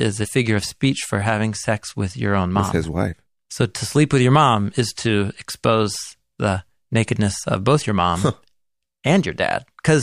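No technical faults can be heard anywhere in the recording.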